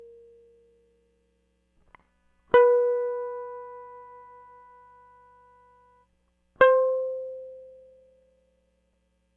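Nothing goes wrong anywhere in this bit of music, so there's no fault to point out.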